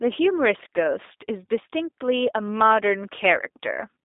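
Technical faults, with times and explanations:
throughout G.729 codec: speech sounds rough and synthetic with nothing above 3.8 kHz, because each frame is rebuilt from a vocal tract filter and sparse pulses.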